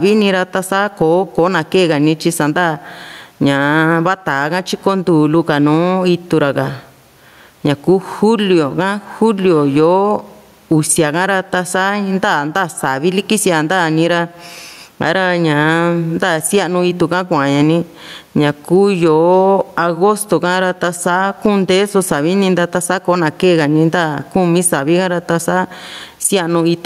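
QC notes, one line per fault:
throughout: gain pumping. The room noise sits about 45 dB below the speech, and the gain swings by around 10 dB. Loud and quiet parts sound squashed together. The likely cause is excessive input gain with a fast limiter.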